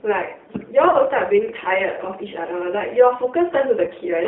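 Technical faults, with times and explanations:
Throughout: G.729 codec. The 8 kbit/s rebuild from a vocal tract filter and a few pulses per frame, in a 200 Hz to 3.7 kHz band, makes the speech plainly rough and synthetic.
0.90–0.96 s and 3.84–3.89 s: VoIP packet loss concealed by the speech codec. Each gap of about 30 ms, consistent with one lost packet, is filled with a stretched sound, a buzzy tone or coloured noise that fades, extrapolated from the last pitch and filter.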